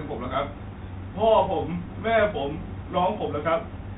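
A speech recording with a dull, boxed-in tone and a grainy hiss beneath it. Nothing above 4 kHz survives, s sounds come out scratchy, and louder high-pitched moments rough up as the encoder's step size fails to keep pace. This is the Bluetooth CVSD headset codec: the signal is reduced to a one-bit up-or-down stream at 64 kHz with an adapting step, and that coarse tracking is what leaves the granular noise and plainly audible damage throughout. Two brief ticks stand out, one at 1.86 s and another from 3.19 to 3.21 s. Each is a Bluetooth headset packet repeated: voice data went missing between headset and phone, and the chip decoded the previous packet's bits a second time. Each gap spans about 7.5 ms, which fits two lost 3.75 ms packets, too short to build into a sustained buzz, so the repeat is heard only as a small click.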